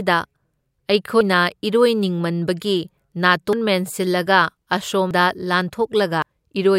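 Four abrupt skips interrupt the speech, at 1.21, 3.53, 5.11 and 6.22 s, each with the sound jumping forward by about a tenth of a second. These are likely dropped buffers (overrun): samples were overwritten before being read, so a chunk vanishes and the neighbouring audio butts together. Unlike an underrun, no silent gap or stutter is inserted. The timing simply leaps ahead.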